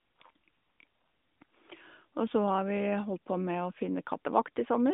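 No technical faults can be heard anywhere in this speech.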